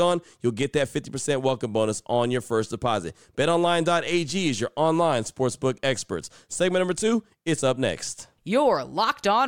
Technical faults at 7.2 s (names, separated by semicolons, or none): none